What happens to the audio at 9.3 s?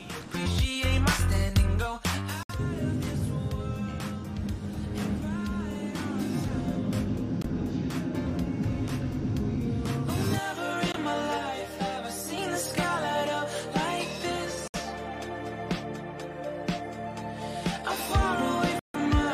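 Nothing goes wrong at 9.3 s: the audio plays through that moment intact, with no dropout, click, glitch or other fault.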